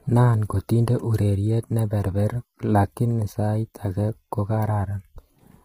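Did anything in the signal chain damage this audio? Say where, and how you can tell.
Yes. Throughout, the speech sounds rough and grainy, with noise filling the gaps between harmonics and a thin, synthetic-sounding top band. At the codec stage this is likely heavy low-delay AAC compression, AAC-ELD, whose short frames resolve pitch poorly and fit a low bitrate around 24 kbps.

Three single sharp clicks occur at 3.19 s, 4.00 s and 4.95 s, each a thin vertical line across the spectrum. These are likely dropped samples at the driver or buffer stage. A tiny fraction of a millisecond goes missing, so the waveform jumps abruptly.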